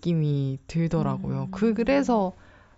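No technical faults can be heard anywhere in the speech. There is nothing to place on the timeline and no fault to explain.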